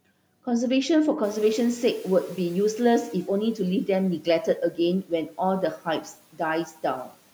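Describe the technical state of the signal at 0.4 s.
At 0.4 s the signal is intact, with no dropout, distortion or other system fault to be heard at that moment.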